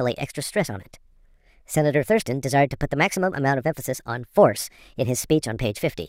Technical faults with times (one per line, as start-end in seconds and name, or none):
0.00-6.08 wrong sample rate